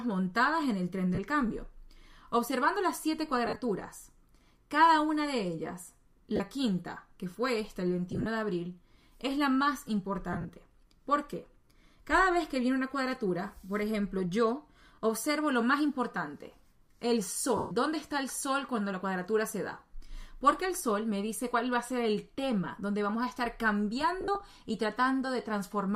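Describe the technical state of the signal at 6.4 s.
Lost LE Audio frames, 6.36–6.41 s: about 40 ms (fitting four LC3 frames) filled with the last spectrum at random signs, heard as a noisy smear; spectrograms show blurred, grainy bands.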